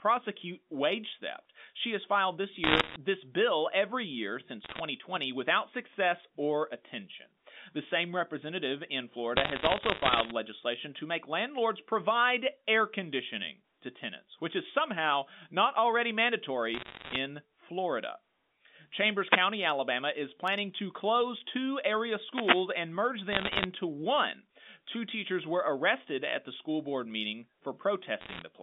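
A speech recording carried over a G.711 A-law telephone line, band-limited to roughly 200 Hz to 3.6 kHz. It has two kinds of fault. Bit errors on a digital phone line cause bursts of sharp crackle at 2.64 to 2.96 s, 4.64 to 4.80 s, 9.36 to 10.32 s, 16.74 to 17.16 s, 23.32 to 23.66 s and 28.20 to 28.42 s. The first burst falls after "has filed this", and the third after "same representative in". Each flipped bit corrupts one logarithmic sample, and hits on high-order bits become ticks. The first burst is the densest, near a few percent of bits; the rest are nearer one percent. Separately, two wireless microphone noise hits appear as brief swishes of static at 19.26 to 19.41 s and 22.30 to 22.66 s. There the FM radio link faded, letting receiver noise rise over the signal.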